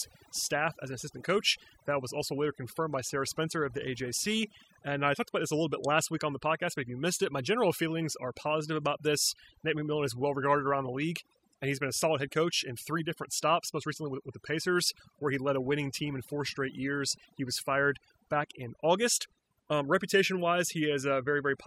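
A speech recording with overdone noise removal running through its whole length. Between phrases the background drops to an unnatural near-silence scattered with brief twinkling specks, and the voice itself has its softer detail eaten away. The cause is a noise reduction stage set far too aggressively: any frequency band sitting close to its noise estimate gets pushed down or switched off, so quiet parts of the speech are removed along with the noise.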